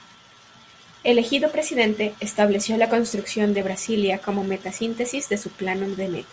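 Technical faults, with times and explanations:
No technical faults can be heard in this speech recording. Nothing in it needs a time or an explanation.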